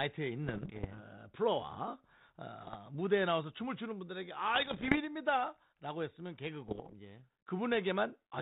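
Speech heard through a 32 kbit/s G.726 ADPCM path, band-limited below 4 kHz, carries bit errors on an ADPCM link at 0.46–1.00 s, 2.61–2.76 s, 4.55–4.98 s and 6.68–6.95 s. Each flipped bit knocks the decoder's step size and predictor off track, so clicks smear into rough, ringing bursts with brief level jumps. Packet loss would instead leave gaps or muted stretches. The densest burst, near 6.7 s, suggests an error rate around one to two percent.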